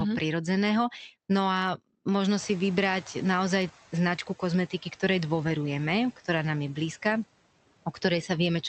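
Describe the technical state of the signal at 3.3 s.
At 3.3 s the noise suppressor is catching up, from 2.38 to 3.7 s, just before "značku kozmetiky". The room noise jumped by about 24 dB near 2.5 s, and the suppressor's noise estimate lags, so the noise passes with little reduction before sinking about 6 dB over roughly 1.3 s.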